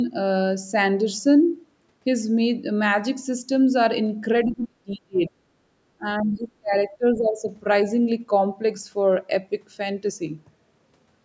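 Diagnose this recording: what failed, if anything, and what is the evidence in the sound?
Call processing stage, echo canceller. From 4.45 to 5.44 s the speech drops away, at its deepest by roughly 40 dB, then again from 5.97 to 7.44 s by roughly 25 dB. This is likely speech suppressed in double talk: unable to separate the local talker from loudspeaker echo, the canceller attenuated everything.

Same stage. Around 6.2 s, for about 40 ms, a brief scrap of a second voice is audible, roughly 25 dB below the speech. This is likely the other side's voice leaking through, residual loudspeaker echo the canceller failed to subtract from the microphone signal.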